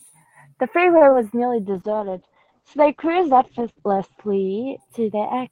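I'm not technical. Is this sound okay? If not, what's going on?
No. At 0.97 to 1.03 s the voice briefly sticks, holding a sound a bit too long. This is a short stall from a late packet: the call waited for delayed audio instead of skipping it.

From 1.09 to 1.25 s there's a quick smear or wobble. This is short concealed packet loss: a tiny piece went missing and was patched with a guess.

From 1.76 s to the end, the voice turns rough and muffled and loses its crisp top end. This is a call bitrate drop: the connection weakened, so the call sent much less detail.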